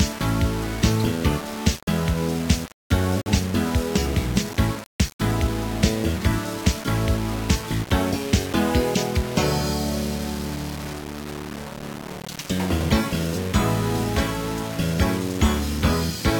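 Throughout, the sound is grainy and gritty, with the distortion following its level. This is likely low bit depth without dither, which fits rounding to about 5 bits.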